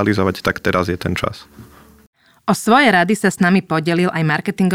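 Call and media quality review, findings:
No audible faults found in the speech recording, so there is nothing to attribute to any component and no action is required.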